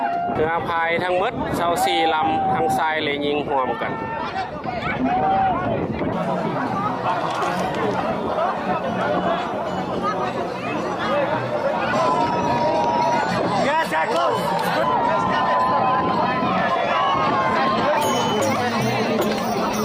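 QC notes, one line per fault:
Nothing here caught my ear as a fault, so there's nothing to log for this one.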